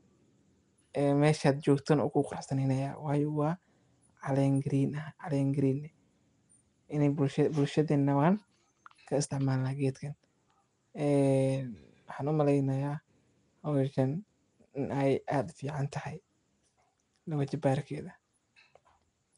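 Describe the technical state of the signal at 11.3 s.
Nellymoser compression is audible at 11.3 s, as it is throughout the clip, with plainly audible codec damage and nothing above about 10.6 kHz. The speech has a rough, hissy halo and a smeared, underwater quality, likely from 256-sample blocks coded at a fixed two bits per sample, with starved bands refilled by noise.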